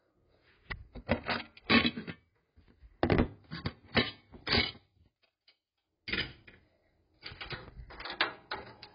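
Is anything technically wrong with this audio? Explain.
Yes. AAC compression damage runs throughout the clip. Nothing is present above about 5.2 kHz, so the audio sounds dull and muffled, and the remaining content has a smeared, warbling quality. This is likely the work of an AAC-LC encoder at a very low bitrate, which fits something around 16 kbps. Short of bits, the encoder lowered its cut-off and quantised the remaining frequency lines coarsely, leaving gaps and fizzy texture where detail should be.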